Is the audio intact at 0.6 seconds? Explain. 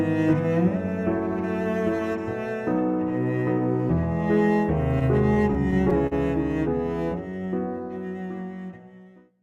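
Yes, at 0.6 s the audio plays through cleanly, with no dropout, click, distortion or other audible fault at that moment.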